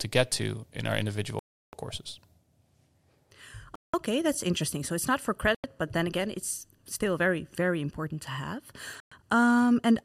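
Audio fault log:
1.39 to 9.12 s, Bluetooth stall: The speech cuts to silence four times, at 1.39 to 1.73 s, 3.75 to 3.94 s, 5.55 to 5.64 s and 9.00 to 9.12 s. The gaps last about 0.34, 0.18, 0.09 and 0.11 s. Each time the sound simply stops, then resumes. The likely cause is radio interference delaying packets. The headphones' buffer empties and playback waits for the resent data, so the audio drops out.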